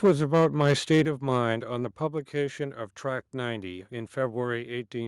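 From 0.04 s to 1.01 s the speech suffers microphone overload. The loudest syllables carry a harsh, crackling edge, with peaks pushed about 4 dB beyond the converter's limit and a small share of the waveform flattened at that limit, most likely from the microphone's input volume being set too high for the converter. Unlike codec distortion, which smears across quieter passages too, this grit appears only on the strongest peaks and vanishes between them.

At 0.06 s, 1.05 s and 2.07 s the microphone volume is stepped down, by about 2 dB, 6 dB and 3 dB respectively. This is likely the call software reacting to the clipping by cutting the device's input gain. Each cut drops voice and background together in a single instant, at the same moment and by the same amount, rather than sliding gradually the way a fade or a steadily riding automatic gain control would. The largest drop, at 1.05 s, comes right as the overload ends.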